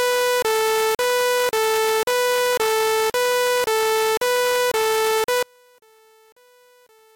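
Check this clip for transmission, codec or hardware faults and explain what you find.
One fault is present near the end. From 5.43 s to 7.16 s the level falls by about 34 dB, likely because one channel is inverted: summed to mono, shared content cancels and only a faint remainder survives. The waveform shrinks abruptly, and the spectrogram darkens across all frequencies.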